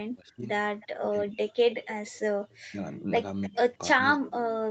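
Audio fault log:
0.21–1.49 s and 2.65–4.37 s, speech suppressed in double talk: the talker's level repeatedly sinks, at worst by about 40 dB, for around 0.7 s in total in each stretch. This is likely an echo canceller damping both sides while the far end talks. The waveform shows gouged, near-flat gaps, and the spectrogram shows speech bands fading to blank patches.
0.80–0.87 s, 1.71–2.19 s and 3.45–3.76 s, echo leak: a faint copy of the speech returns 306 ms late, at about −30, −20 and −25 dB. The likely cause is a loudspeaker echo that was not fully cancelled. On a spectrogram it appears as a dim, shifted duplicate of the harmonic patterns.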